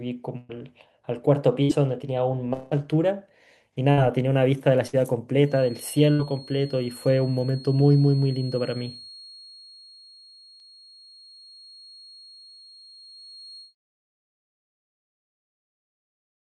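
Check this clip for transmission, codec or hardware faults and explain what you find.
Yes, there are four kinds of fault in this speech: repeated bursts of packet loss, one longer dropout, a feedback whistle, and a single overlapping-chunk join.

Burst of packet loss occurs at 0.37 to 0.52 s, 1.63 to 1.72 s, 3.91 to 4.00 s, 4.87 to 4.96 s and 6.13 to 6.22 s. Consecutive packets failed to arrive in time. The receiver extended the last sound, fading it over roughly 55 to 115 ms, so voiced sounds become a brief held buzz and unvoiced ones a dying hiss. Speech resumes further on with about 60 ms missing each time, or 120 ms in the first burst.

A long network dropout appears from 2.53 to 2.74 s. The sound is concealed for about 177 ms with a continuation of the preceding audio that decays as it goes, never reaching true silence, before the speech picks up again with roughly 180 ms absent. The length and shape point to a likely interruption in the network stream, longer than the ordinary bursts around it and filled in the same fading manner.

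A feedback whistle runs from 5.41 to 13.75 s. It is a thin, steady tone at 4.3 kHz sitting around 25 dB below the speech, swelling and fading slowly in level. The likely cause is an acoustic loop from loudspeaker to microphone held just short of instability, so one frequency keeps ringing without building into a howl.

Overlapping chunks produce one defect at 10.60 s. The audio was processed in 6-second chunks, and at this join the new chunk began before the previous one had ended, replaying about 7 ms of sound. It is heard as a click or stutter.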